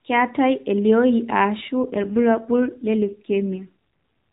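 From 1.82 to 3.68 s the speech goes through an AMR rate drop: the mobile codec falls to a lower mode, which fits a step from 12.2 kbps down to about 5.9 kbps, and turns buzzier and more synthetic. Unlike packet loss, nothing drops out. The narrowband 4 kHz ceiling of AMR-NB stays put before, during and after.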